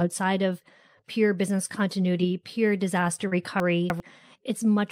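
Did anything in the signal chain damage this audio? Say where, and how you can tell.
Yes, in two places, both shortly after "business continuity pure disaster". At 3.27 to 3.33 s there is short concealed packet loss at the network stage. About 40 ms of audio never reached the decoder, and the receiver filled roughly 37 ms by extending the preceding sound before blending back into the real signal. It is heard as a brief smear rather than a click or a dropout to silence. That smoothness is what separates it from a hard gap or reordering.

From 3.6 to 4.0 s there are chunks out of order, introduced at the buffer or write stage. One 100 ms chunk landed three chunks late, so it plays after material that should follow it. The passage sounds jumbled, with three hard joins. Unlike concealed loss, nothing is smeared or invented. All the audio is present, just in the wrong sequence, and the abrupt splices give it away.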